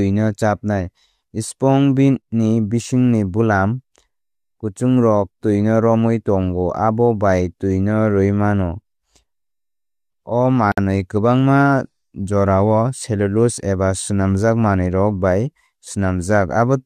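At 10.72 s the speech drops out completely until 10.78 s, a gap of about 58 ms, and that's a classic gap at a join of encoded pieces. Two separately encoded chunks were stuck together without trimming the encoder's start-up delay and last-frame padding, so that dead air sits right in the flow. You hear a sudden hole with softened edges, then the speech picks up exactly where it left off.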